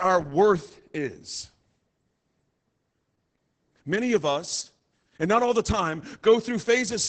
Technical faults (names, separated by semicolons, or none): Opus voice compression